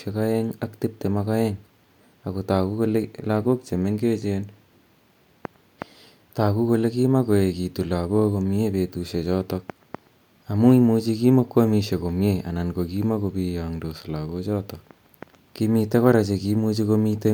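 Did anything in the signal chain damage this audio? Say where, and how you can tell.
No, nothing in the signal chain damaged this audio.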